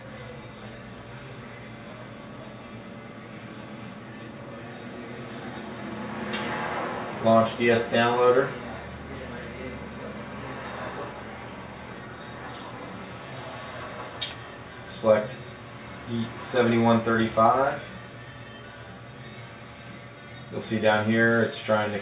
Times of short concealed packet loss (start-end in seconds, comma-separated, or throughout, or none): none